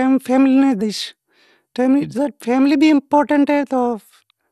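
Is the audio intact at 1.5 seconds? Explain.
No. Word clock ticks run from 1.17 to 3.79 s, so 1.5 s falls inside that span. A receiving device free-running on its own clock, off by roughly 15 parts per million, drops or repeats a single sample about every 1.5 s, giving around three sharp, uneven ticks in the speech.

The whole clip, 1.5 s included, also sounds dull and granular, with nothing above 12.2 kHz and a gurgling roughness. This is likely MP2 compression at a low rate, consistent with about 80 kbps, where upper sub-bands are switched off and the remaining bands are coarsely quantised.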